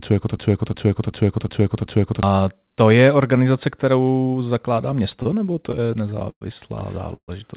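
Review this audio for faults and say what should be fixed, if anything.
From 0.37 to 2.23 s, a system hang loop repeats one 0.37 s slice five times, a machine-gun stutter at 2.7 Hz. That fits a 16384-sample ring buffer replaying while the driver froze. Roughly two seconds of audio is lost before "to je organizace kterou". Keep the audio thread responsive and mute output when the driver stalls.

From 5.10 to 6.43 s, after "je organizace kterou zakládá", there are repeated stalls (stutter). Twelve short gaps are filled with continued sound, about 250 ms in total, and the longest is 109 ms. Nothing is missing, but the sound drags. Give the jitter buffer more headroom on this link.

From 7.15 to 7.30 s there is a call audio freeze. About 127 ms is inserted, including 70 ms of silence, likely from delayed packets emptying the jitter buffer. Fix the network delay spikes on the path.

The G.711 A-law codec on this call leaves nothing above 4 kHz.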